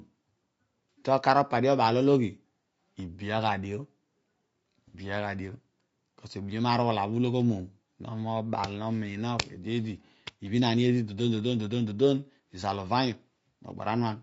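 Across the whole clip the speech sounds rough and grainy, with a hiss that fills the gaps between the harmonics and an upper band that sounds thin and synthetic. The damage is plainly audible. This is likely low-delay AAC compression (AAC-ELD). It codes about 500 frequency lines a frame with a low-delay window, so at a bitrate that sounds like about 32 kbps too few bits remain to keep the spectrum clean.

From 4.88 to 4.96 s there is a brief smeared, noisy patch in which the speech loses its definition and turns phasey. This is AAC frame loss with concealment. About 60 ms of coded audio, consistent with two lost frames, never reached the decoder. The decoder covered the gap by rebuilding it from the last good spectrum, so that stretch holds a blurred imitation of the sound rather than the real signal.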